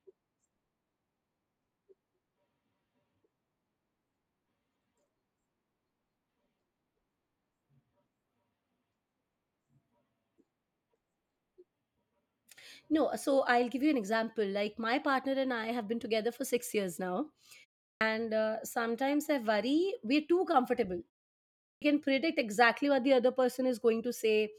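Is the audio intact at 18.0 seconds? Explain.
No, there's a clipped start after a pause right there, from 17.92 to 18.01 s. After a 0.35 s gap the output device dozed off and took about 89 ms to wake, so the speech snaps in abruptly with its opening sounds missing.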